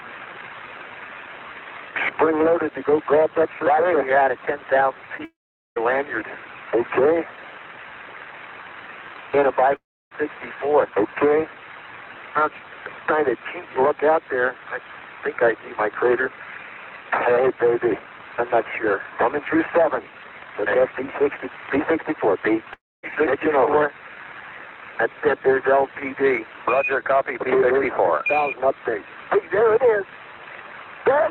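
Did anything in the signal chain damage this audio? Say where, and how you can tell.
Yes. The damage happens in the network stage. At 5.17 to 5.21 s there is a brief smear where about 20 ms of audio never arrived. The receiver's concealment extended the previous sound to fill the gap and then blended back. This is short concealed packet loss.

The sound cuts out three times: 5.25 to 5.78 s, 9.76 to 10.13 s, and 22.74 to 23.05 s. Each gap starts with a fading synthetic tail, followed by about 430 ms, 310 ms and 240 ms of silence. The audio then resumes with that material missing. The likely cause is a long network dropout.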